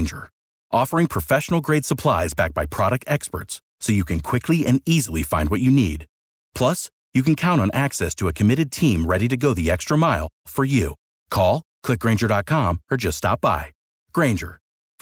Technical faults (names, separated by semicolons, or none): none